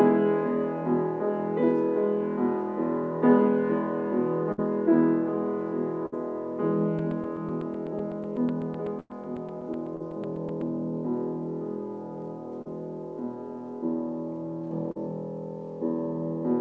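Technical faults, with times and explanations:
4.52–4.60 s, 6.06–6.14 s, 9.00–9.12 s: burst of packet loss. Runs of packets arrived too late, about 60, 60 and 100 ms. The receiver stretched and faded the last sound, then skipped ahead.
6.99–10.62 s: periodic USB or driver dropouts. A blocking background task cut roughly 4 ms to silence every 0.125 s, around thirty times, giving a steady ticking under the signal.
9.96–10.02 s, 12.62–12.67 s, 14.91–14.97 s: short concealed packet loss. About 40 ms never reached the decoder each time. The concealment filled it, leaving a brief smear or wobble.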